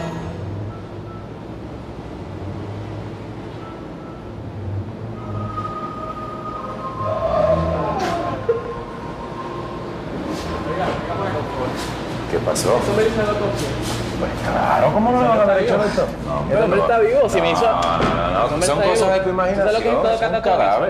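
Nothing here trips any alarm: no dropouts, glitches or other technical faults turn up anywhere along the way.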